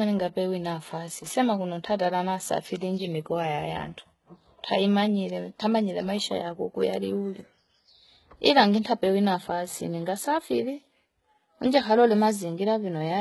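From start to finish the speech carries the signature of heavy HE-AAC compression, likely at a very low setting, with the damage consistent with a bitrate around 16 kbps. Only the lower band is truly coded; the treble is rebuilt by spectral band replication, so its harmonics fail to line up above the crossover. S sounds come out gritty, lispy and metallic. On a spectrogram the upper band looks like a smeared, blocky copy of the lower one.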